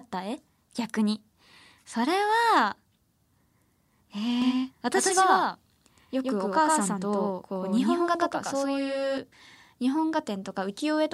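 From 4.42 s to 9.18 s the speech takes on a hard, stuttering doubling: every syllable is followed about a tenth of a second later by an identical copy at roughly the same loudness, clean and full-band with no reverberant tail. It switches on and off abruptly at those points. This is a doubled audio track, likely from the same signal being mixed in a second time through a slower path or a misaligned edit.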